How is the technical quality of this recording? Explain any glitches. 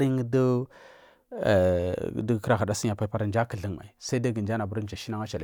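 No technical faults are audible.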